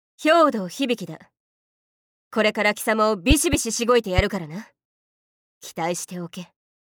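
Two loud pops break into the audio. The first comes between 3.31 and 3.56 s as a double pop, two sharp hits in quick succession. A single pop follows from 4.18 to 4.22 s. Each peaks roughly 15 dB above the surrounding sound, which carries on underneath. The likely cause is a sudden voltage pulse, from a plug, switch, static discharge or driver glitch, added to the signal and then shaped by the following circuitry into a pop.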